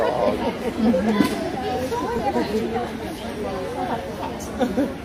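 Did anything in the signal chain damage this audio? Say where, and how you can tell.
Yes: likely a dropped buffer (overrun) in the driver, which discarded roughly 10 ms unread. At 2.19 s the sound skips slightly ahead, with no gap.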